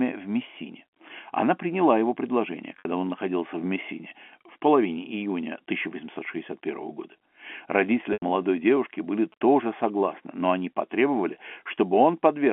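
Telephone-band speech, carried over G.711 mu-law at 64 kbps with the line passing roughly 250 Hz to 3.4 kHz, has two kinds of fault. Packet loss with pitch repetition appears at 2.79 to 2.85 s, right after "приняла его предложение" and before "он находился в", and again at 8.13 to 8.22 s. The receiver fills the 60 ms and 90 ms gaps by looping the last pitch period and fading it out, so you hear a brief held, buzzy tone that fades into silence before the speech returns with a short cross-fade. GSM signalling bursts run from 7.53 to 10.14 s, ending just before "но они потребовали". The bursts are a faint galloping pattern of short buzzes at a 217 Hz rate, roughly 30 dB under the speech, picked up from a nearby 2G phone and rectified by the audio circuit. Their stuttering on-off rhythm separates them from steady mains hum.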